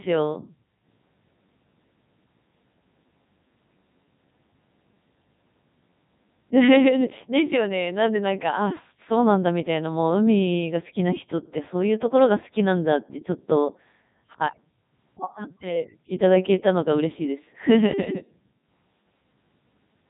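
From start to finish the speech has passed through the Codec 2 vocoder, with heavy damage. The voice comes out robotic and buzzy because the decoder rebuilds it from sine waves using only pitch, voicing, energy and a spectral envelope, so the original waveform is gone. Even so, this is the top 3.2 kbit/s mode. On a spectrogram, clean harmonic stripes stop sharply at 3.8 kHz, and the waveform looks regular and synthetic, lacking natural irregularity.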